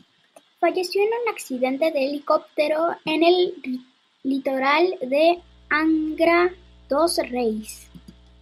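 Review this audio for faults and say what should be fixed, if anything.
A steady low drone enters at 5.37 s and continues to the end of the speech at 8.41 s. It is mains hum at 60 Hz, sitting around 30 dB below the speech, so it is faint. Power-line current is leaking into the signal path, typically through a ground loop between connected devices or from a transformer placed too close to a cable or input. Prevent it by powering all equipment from one grounded outlet and routing audio cables away from power supplies.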